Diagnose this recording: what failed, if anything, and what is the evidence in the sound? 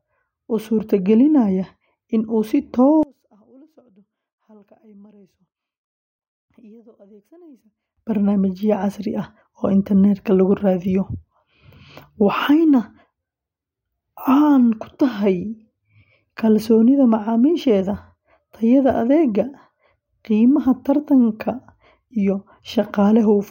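From 3.03 s to 7.97 s the speech drops by about 32 dB and turns faint, then returns at full level. The likely cause is one channel inverted, a polarity reversal in the analogue wiring or channel routing, with the signal heard summed to mono. With one leg flipped, everything common to both channels cancels, taking the centred speech and low end with it. Only the small left-right difference survives, which accounts for the faint residue.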